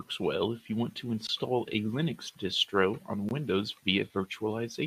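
Gap between chunks at 1.27–1.29 s, after "if you want to", and 3.29–3.31 s, after "distro on": silence is inserted where 2-second chunks join, heard as 20 ms holes with no sound lost.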